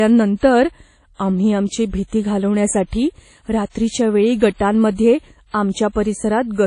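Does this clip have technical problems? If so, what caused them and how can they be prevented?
Yes. Throughout the speech, the audio was likely passed through WMA compression at a low bitrate, consistent with WMA 1 at about 32 kbps. Long transform blocks smear quantisation noise over tens of milliseconds and drop weak detail, so the speech sounds ringing and washy, with hiss that breathes with the signal and nothing above 10.1 kHz. Encoding at a higher bitrate, or with a more modern codec, would prevent this.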